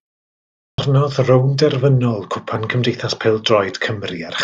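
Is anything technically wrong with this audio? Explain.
Yes. A clipped start after a pause occurs at 0.54 s, where roughly 240 ms of speech is missing, up to 0.78 s. The output path sits idle through the opening 0.54 s of silence and has not finished waking or relocking when speech begins, so the first part of the utterance is swallowed. The speech therefore bursts in abruptly out of silence, already underway, without its initial sounds.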